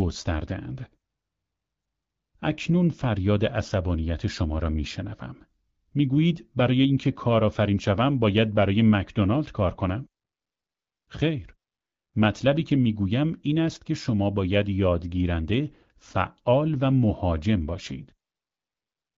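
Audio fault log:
No faults are present in the speech. The AMR wideband (HD Voice) codec runs at 12.65 kbit/s, giving a band that tops out near 7 kHz and only a light coding texture, so the speech stays clear.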